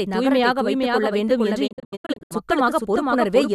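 From the start, every sound comes back roughly half a second later as a second full-band copy about 5 dB quieter. This is a doubled audio track, likely a second capture through a slower path or two copies held out of step in an edit. It differs from an echo or reverb because the copy has no decay and no room colouring. It stays the same, a clean repeat at a fixed delay.

Just after "வைத்துக் கொள்ள வேண்டும் என்று", from 1.66 to 2.33 s, a digital broadcast dropout breaks the audio into several short silent holes. They add up to about 384 ms within that 0.66 s span, and the longest single gap is 72 ms. Each hole fades out over about 20 ms, which suggests a receiver muting whenever incoming frames failed their checks. This is not a deliberate cut, because the gaps are scattered and the missing material never comes back.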